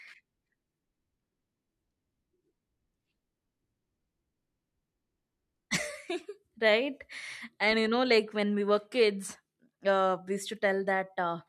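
Nothing goes wrong anywhere in this bit of speech, so there's no fault to point to at any moment.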